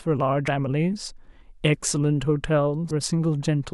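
Damaged data in a compressed stream breaks the speech twice, from 0.45 to 0.48 s and again from 2.88 to 2.91 s. Corrupt bytes leave the decoder unable to read those frames until it regains sync at a valid header, and each lost stretch comes out as a brief chirp, squawk, click or short hole of about 30 ms.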